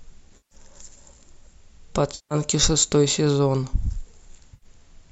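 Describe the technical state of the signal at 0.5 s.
At 0.5 s the sound turns smeared and phasey, a hollow noisy patch running from 0.37 to 0.55 s. This is AAC frame loss with concealment: about 140 ms of frames went missing, and the decoder refilled the gap by reusing the last good spectrum with scrambled signs or interpolated energy. The short frames involved likely come from low-delay AAC.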